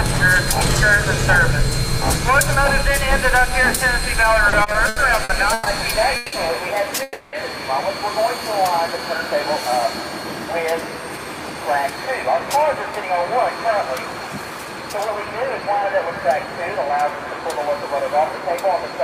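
From 4.49 to 5.68 s there are repeated stalls, a stutter. Six gaps are filled with continued sound, the longest 130 ms. The audio drags but loses nothing.

A call audio freeze holds the sound from 6.16 to 6.34 s, then again from 7.03 to 7.35 s. Each is a fading held buzz, not silence, lasting 160 ms and 300 ms. Late packets likely emptied the jitter buffer.

From 8.37 to 8.98 s comes a jitter buffer slow-down. Repeated pitch periods add 51 ms. The sound runs at 93% speed with unchanged pitch.

From 10.72 to 14.82 s a jitter buffer speed-up trims about 0.4 s. The sound plays at 108% speed, hurried but at the same pitch.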